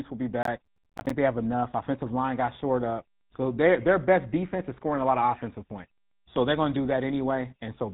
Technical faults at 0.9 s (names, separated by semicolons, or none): GSM full-rate codec; processor overload crackle